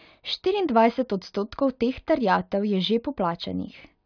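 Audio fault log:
No faults heard anywhere in this speech recording.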